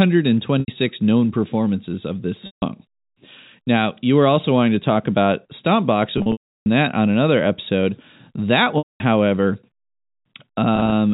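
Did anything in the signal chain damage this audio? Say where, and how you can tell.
Yes, packet loss with pitch repetition on the network leg: gaps at 0.60 s (80 ms, before "known performances of this"), 2.46 s (160 ms, after it), 6.18 s (400 ms over 0.48 s, before "that on another"), 8.78 s (220 ms) and 10.76 s. Each gap was filled by repeating the last pitch period, which faded to silence on the longer losses. On a spectrogram, frozen harmonic stripes fade into blank gaps. On the waveform, identical repeating cycles decay.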